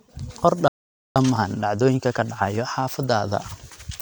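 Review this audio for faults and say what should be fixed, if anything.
The speech drops into a playback stall from 0.68 to 1.16 s, about 0.48 s of silence, then resumes where it stopped, most likely because the player's buffer ran dry or its thread was blocked. Unlike a dropout, nothing is skipped. A deeper jitter buffer and a non-blocking audio thread would prevent it.

From 1.16 s to the end, time-compressed catch-up plays the speech about 1.1 times faster at normal pitch, by cutting out and cross-fading small pieces. A speed-up by resampling would raise the pitch, and this does not. Absorbing the backlog more gradually, or skipping ahead, would avoid it.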